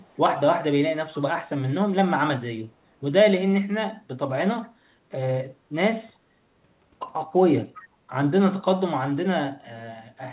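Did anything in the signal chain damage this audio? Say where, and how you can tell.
Yes. At the call-processing stage, an echo leak shows up twice: a very faint delayed copy of the speech from 0.01 to 0.18 s, and a much stronger one, roughly 20 dB below the direct speech, from 7.74 to 7.84 s. Both arrive 397 ms after their source, riding on the narrowband call audio with nothing above 4 kHz. That fixed, long delay and the discrete copies set this apart from room reverberation, which trails off continuously. The likely cause is a far-end loudspeaker feeding its microphone past an echo canceller that did not remove all of it.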